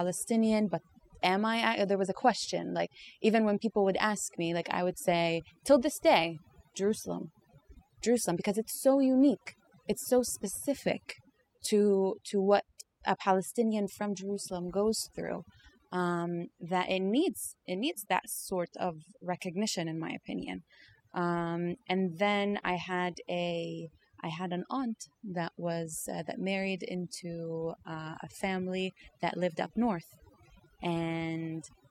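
Across the whole speech clip there is overdone noise removal: frequency bands near the estimated noise floor are pulled down hard, so quiet voice detail vanishes with them. Pauses fall to near silence dotted with twinkling specks, unlike a noise gate's whole-signal on-off cuts.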